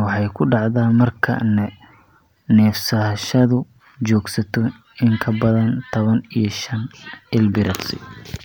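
No technical faults are audible.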